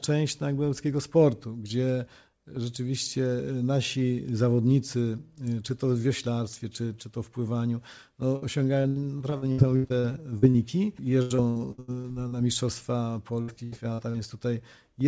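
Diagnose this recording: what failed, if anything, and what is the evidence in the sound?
Burst of packet loss at 8.36 to 8.44 s, a network fault. The last sound is stretched for about 60 ms and fades, then the audio resumes further on with roughly 60 ms absent, so the missing packets were concealed by extrapolation, not recovered.

Repeated packet loss (robotic sound), also on the network side, across 8.82 to 10.56 s (12 gaps), 11.22 to 12.34 s (8 gaps) and 13.42 to 14.16 s (4 gaps). Each hole, up to 80 ms, is patched before the next arrives, making choppy audio with about 28 to 36 percent concealed. The call path's band stops at 8 kHz, which fits G.722.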